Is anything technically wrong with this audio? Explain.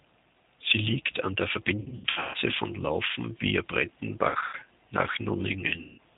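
Yes. The speech runs through the G.729 codec, which fits its 8 kbit/s rate. It rebuilds each 10 ms frame from a vocal-tract filter, a pitch predictor and a few pulses, so the voice sounds plainly rough and synthetic. A spectrogram shows a hard ceiling at 4 kHz.

VoIP packet loss concealed by the speech codec hits at 1.8–2.37 s, right after "liegt an der", then at 4.29–4.56 s and 5.8–5.99 s. The first loss totals about 390 ms, scattered over 540 ms with a longest run of 150 ms. The second totals 150 ms over 240 ms, and the third is 180 ms. The decoder stretches its last pitch and filter into a fading buzzy tone or coloured noise. The waveform shows decaying, overly regular cycles, and the spectrogram shows smeared, flat harmonics.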